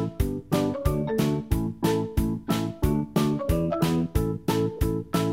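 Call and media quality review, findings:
Corrupt frame decoded, 4.76–4.78 s: short chirp/blip, apparently a single damaged frame. Probable component: decoder accepting a bit-flipped frame, with misread gains or codes pushing energy into wrong bands. Spectrogram: isolated vertical smear about 26 ms wide; error peaking around -25 dBFS.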